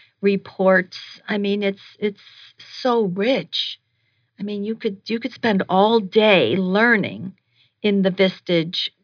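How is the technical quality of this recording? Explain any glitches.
The speech signal holds steady throughout, with no audible glitch interrupting or disturbing it at any point.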